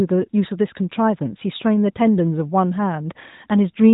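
Speech, with no technical faults audible anywhere.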